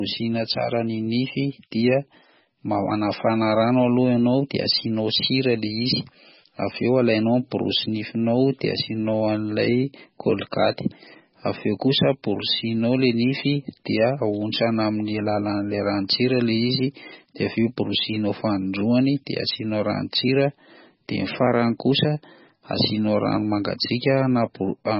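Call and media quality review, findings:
Throughout: watery, swirly speech; dull, with nothing above 5.5 kHz; s sounds metallic and chirpy, attacks smeared. Likely MP3 compression at a starved bitrate, fitting roughly 16 kbps: treble cut at a fixed frequency, weak spectral lines flickering between frames.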